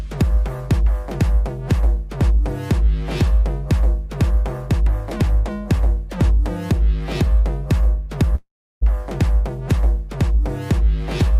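Long network dropout at 8.35 to 8.83 s: the sound fades into a buzz, then 330 ms of silence, resuming with 460 ms gone, likely from dropped packets.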